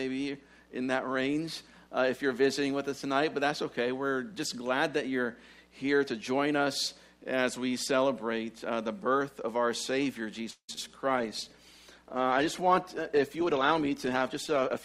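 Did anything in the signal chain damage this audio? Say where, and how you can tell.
Yes. At the network stage, packets were likely delayed and the jitter buffer ran dry, producing a call audio freeze from 10.50 to 10.70 s. The last sound is stretched into a fading buzz or hiss, then about 90 ms of silence, before the audio resumes where it stopped with nothing lost.

Short concealed packet loss follows at 10.74 to 10.90 s and again at 10.76 s. Audio arrived too late for the decoder, so the receiver extrapolated from the preceding sound and crossfaded back, leaving a brief smear or wobble where real content should be.

A call bitrate drop sets in at 11.10 s and lasts to the end. The bandwidth estimate fell and the encoder was pushed from 64 to 20 kbps, so the codec quantises more coarsely and trims the top end, leaving the sound rougher and duller.

A jitter buffer speed-up runs from 13.37 to 14.79 s. 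The buffer had accumulated surplus delay, so the receiver repeatedly cut out pitch-period-length slices, roughly a fifth of a second in total, and playback runs at 112% speed with the pitch unchanged, sounding rushed.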